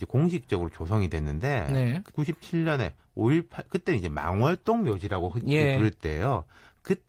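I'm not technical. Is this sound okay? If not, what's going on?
No. A skip ahead happens at about 2.1 s: roughly seven tenths of a second of speech never plays, and the talk on either side is joined with no gap. That stretch was lost in delivery or thrown out when the incoming audio piled up.

Right after, from 2.68 to 3.14 s, there is a jitter buffer speed-up. The speech plays about 10% faster at the same pitch, sounding a little rushed, because the receiver trimmed many tiny slices, about a twentieth of a second in total, to catch up.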